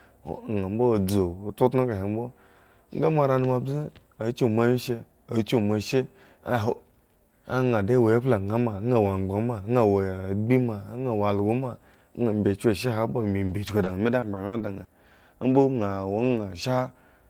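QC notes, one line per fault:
13.45–14.90 s, repeated packet loss (robotic sound): six short dropouts, longest 60 ms, patched by repeating prior audio, giving choppy speech; spectrogram shows smeared, stuttering frames.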